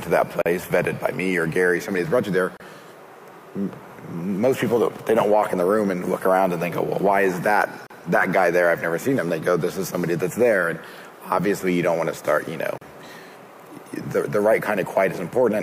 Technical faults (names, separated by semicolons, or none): gap at a join of encoded pieces